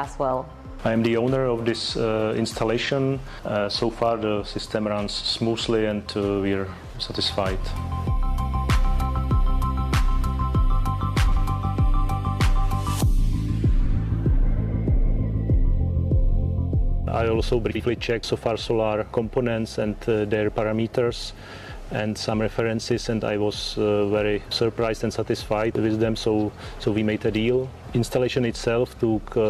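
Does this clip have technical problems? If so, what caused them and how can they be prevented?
Yes: frames out of order at 2.84, 11.27, 13.85, 17.70 and 27.85 s. Adjacent blocks of 23.2 ms (first and last) or 46.4 ms swap places, producing a brief garbled flutter. Unlike a dropout or skip, nothing goes missing and the timing stays intact. Reordering packets by sequence number in a jitter buffer before decoding prevents it.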